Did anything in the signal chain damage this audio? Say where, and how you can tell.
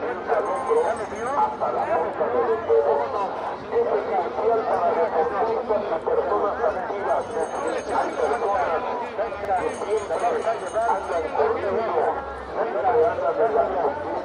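Yes. The overlapping chunks fault happens in the buffer or chunked-processing stage. At 3.40 to 3.45 s and again at 9.45 to 9.50 s, a 50 ms slice of audio plays twice, heard as a brief stutter or click. The two joins are about 6 s apart, which fits 6-second chunks where each chunk starts before the previous one ends. On a waveform, a short stretch visibly repeats with a discontinuity at the seam. A spectrogram shows a thin vertical line at each join.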